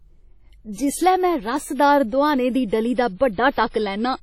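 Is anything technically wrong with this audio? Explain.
Yes, two problems. Throughout, the speech sounds washy and ringing, with hiss breathing along with it and nothing above 18.5 kHz. That's likely heavy WMA compression, consistent with roughly 32 kbps. Then, from 3.15 to 3.20 s, just after "दोहाने दी डली दा", there's pre-echo: the block's quantisation noise smears about 54 ms ahead of an attack, so a brief hiss precedes it and softens it.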